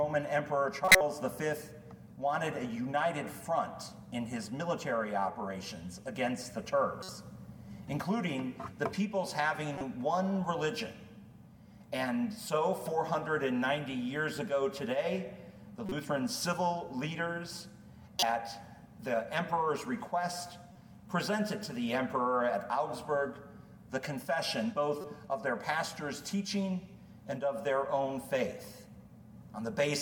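Corrupt frames get decoded at 0.85–1.01, 6.99–7.09, 9.76–9.81, 15.86–15.92, 18.19–18.24, 20.72–20.76 and 25.01–25.04 s. Damaged compressed frames were played anyway, so energy lands at wrong frequencies for a few frames each time, giving short blips or bursts. The first is loudest, around -10 dBFS, and the one at 20.72 s is quietest, around -45 dBFS.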